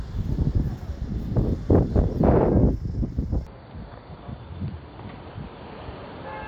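At 3.47 s the input likely switched to a poorer device; the sound goes dull, nothing above 4.6 kHz, changed in level by about 5 dB, faintly noisier.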